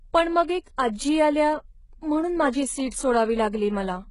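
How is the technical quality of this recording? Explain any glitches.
Technical quality is poor, with heavy codec damage all the way through. The whole speech clip sounds like it went through HE-AAC compression, likely at a very low rate, around 12 kbps. The top end is rebuilt from copied lower bands rather than coded, so sibilants come out gritty and metallic, and nothing at all survives above about 11.1 kHz.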